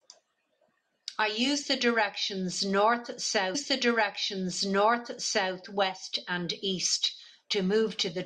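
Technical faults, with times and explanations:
3.54 to 5.55 s, stream segment repeated: about 2 s of speech plays a second time. The player queued the same segment twice, so the audio jumps back and repeats. A small blip marks the jump, where the two copies meet without a smooth join.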